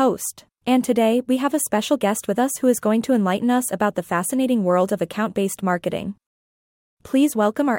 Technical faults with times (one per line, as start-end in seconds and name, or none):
none